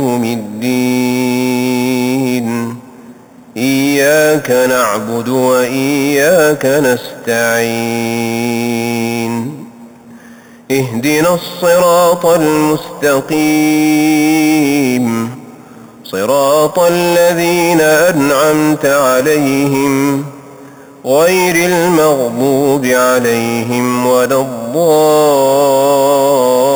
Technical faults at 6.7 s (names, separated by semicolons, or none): imaging from sample-and-hold upsampling